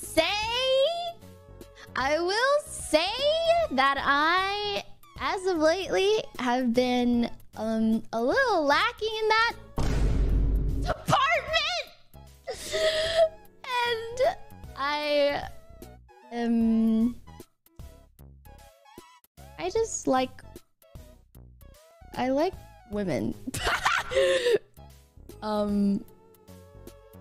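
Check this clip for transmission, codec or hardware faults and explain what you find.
One fault shows up, right at the start. From 0.0 to 2.0 s the sound is dull, with thin, synthetic-sounding treble and stronger codec artefacts, then snaps cleaner without any gap. This is an adaptive stream starting at a low bitrate, consistent with roughly 20 kbit/s HE-AAC, before the player stepped up to a stream fitting about 96 kbit/s AAC-LC, which still has nothing above 14.9 kHz.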